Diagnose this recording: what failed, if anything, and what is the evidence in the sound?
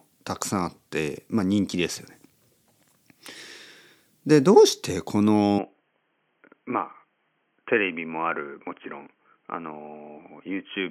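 At 5.59 s the speech turns dull and boxy, without a gap, to the end. Nothing above 3.2 kHz remains. Level falls by roughly 5 dB over a new faint noise floor. At the input stage, this is likely an input switched to a poorer, narrower-band device.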